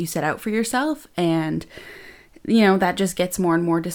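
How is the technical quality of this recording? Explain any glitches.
No technical faults can be heard in the recording. There are no glitches to explain.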